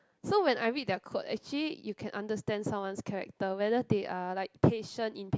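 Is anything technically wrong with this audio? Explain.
No, the signal shows no technical faults at any point in this speech recording.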